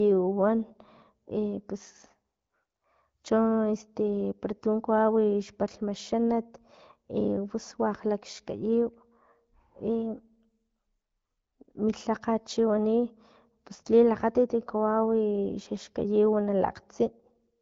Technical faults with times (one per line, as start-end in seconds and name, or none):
9.90-10.80 drift correction step